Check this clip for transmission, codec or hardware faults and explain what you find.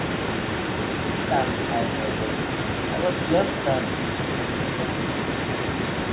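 One fault is present: an echo leak running through the whole clip, from 0 s to the end at about 6 s. The speakerphone side's echo canceller likely let part of what its microphone picked up from the loudspeaker pass back into the call. As a result, the speech returns 248 ms late at roughly 10 dB below the direct voice, heard as a trailing second copy inside the narrow telephone band that stops at 4 kHz.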